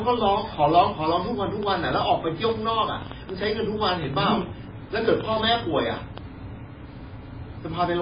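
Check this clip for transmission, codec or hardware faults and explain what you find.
Two faults are present. Throughout the speech, the sound is heavily degraded and nothing is audible above 5 kHz. This is likely MP3 compression at a very low bitrate, perhaps 16 kbps, which discards weak spectral lines and produces a muffled, watery, swirling tone. From 1.63 to 6.19 s, a train of clicks runs at about 5.3 per second with irregular spacing, some thirty in all, peaking around 10 dB above the speech. The probable source is electrical interference or a struggling interface injecting pulses, heard as uneven ticking over the speech and through its pauses.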